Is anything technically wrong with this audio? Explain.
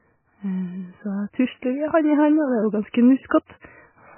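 Yes. MP3 compression damage runs through the whole speech clip. Nothing is present above 3 kHz, and the remaining band sounds watery and swirly. This is likely a starved MP3 encoder, consistent with a bitrate around 10 kbps. It dropped the treble and switched weak frequency lines on and off from frame to frame.

Pre-echo occurs at 2.93 s, at 3.29 s, and from 3.46 to 3.50 s. Each time, the codec spread quantisation noise across its whole block, so hiss from the loud attack leaks into the quiet gap just before it, lasting 13, 19 and 35 ms respectively. Those onsets sound smeared and soft.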